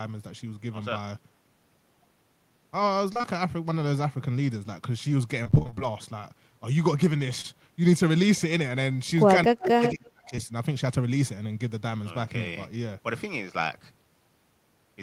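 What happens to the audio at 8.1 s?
Nothing goes wrong at 8.1 s; the speech carries straight through that moment with no dropout, click, distortion or other break.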